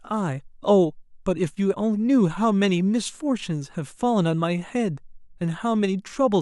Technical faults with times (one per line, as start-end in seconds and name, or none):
none